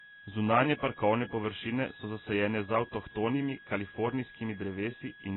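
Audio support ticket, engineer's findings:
Switching supply whistle, whole clip: thin high whistle drifting between 1.65 and 1.68 kHz, about 20 dB below the speech. Probable component: a switching power supply in audible burst mode, its pitch wandering as load shifts.

Dull, smeared speech for the full clip, with nothing above 4 kHz and heavy coding damage. Likely cause: AAC compression (AAC-LC) at a low bitrate, around 16 kbps. The encoder drops upper bands and coarsely quantises the rest against its hearing model.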